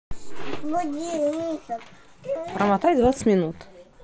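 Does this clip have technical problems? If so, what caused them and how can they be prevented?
No, there's nothing wrong here that needs fixing, just speech coming over what sounds like a Bluetooth headset on the mSBC codec, with the band topping out around 8 kHz as that link normally does.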